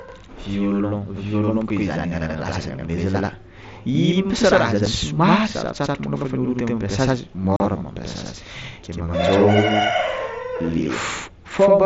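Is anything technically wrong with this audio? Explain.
Yes, there are two faults.

Channel delay (doubling) runs throughout. One channel lags by about 85 ms, which fits a 4096-sample buffer. Summed to mono, the speech is shadowed by an equal-level slap echo.

Unconcealed Bluetooth headset packet loss occurs at 4.86 s, between "raha zany" and "somary sarotsarotro molo fa", and again from 7.56 to 7.60 s. Lost packets left abrupt gaps, heard as brief holes in the speech, which passes through a wideband mSBC headset link.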